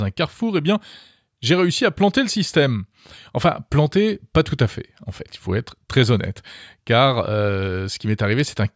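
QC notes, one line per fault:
No faults found in this recording.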